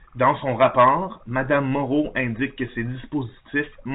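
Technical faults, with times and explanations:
No technical faults can be heard in this speech clip. It carries the narrow band of G.711 telephone coding, with nothing above 4 kHz and only a faint quantisation hiss that rises and falls with the level.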